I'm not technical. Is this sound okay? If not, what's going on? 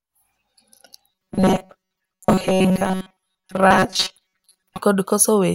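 No. From 1.11 to 4.78 s the speech becomes a rigid, metallic buzz pitched at 188 Hz. This is robotic sound from repeated short buffers: most of that stretch is a roughly 5 ms scrap replayed repeatedly, likely because fresh audio arrived too slowly.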